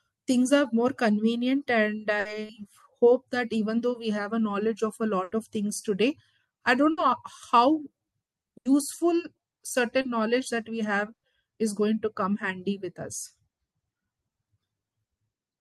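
At 2.19, 5.23, 6.91, 8.57 and 11.13 s the speech breaks with a burst of packet loss. Each time 60 to 100 ms of audio is gone, and the receiver stretches the last sound into a held buzz or hiss that fades before the speech resumes further on. At 11.13 s the fill dies into roughly 90 ms of silence. At 10.01 s a short concealed packet loss of about 20 ms shows as a brief smear. It is much shorter than the bursts.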